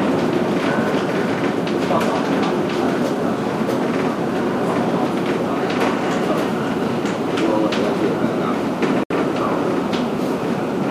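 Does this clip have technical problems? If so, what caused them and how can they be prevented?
Yes. A gap at a join of encoded pieces opens at 9.04 s and lasts about 69 ms, to 9.10 s. Separately encoded segments were butted together untrimmed, so encoder start delay and last-frame padding leave a silence with smeared edges before the sound resumes. Prevent it by encoding continuously or trimming delay and padding gaplessly before joining.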